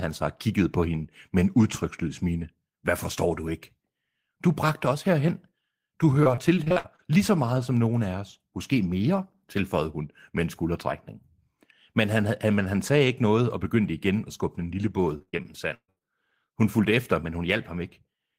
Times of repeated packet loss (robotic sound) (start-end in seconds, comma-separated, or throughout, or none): 6.23-7.00, 15.18-16.02